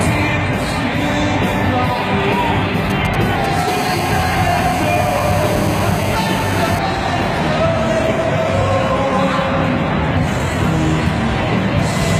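A galloping dit-dit-dit of ticks and short, raspy buzzes sits well under the audio, roughly 15 dB below it, from 2.90 to 3.68 s. These are GSM signalling bursts. A nearby 2G phone is sending brief clusters of radio bursts at about 217 Hz while it exchanges control traffic with the network. A nearby audio circuit rectifies that RF into clicks and fragments of 217 Hz buzz.

Within that stretch, at 3.35 to 3.37 s, the sound jumps forward abruptly. It is joined straight across with no gap and no fill, and around 0.4 s of material is gone. This is a skip ahead. The dropped audio was discarded, either on the way or by an overflowing jitter buffer, while later audio was already queued. Playback resumes from the newer material, and the delay shrinks by about the same amount.

From 3.68 to 6.79 s the intermittent pattern becomes a hard, continuous, harmonic-rich buzz at 217 Hz, about 13 dB below the signal. 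It bears no relation to the content. This is GSM phone buzz. The same phone has moved into a call and now transmits its TDMA bursts steadily 217 times a second. The rectified pulse train produces a fixed tone with a dense series of harmonics above it.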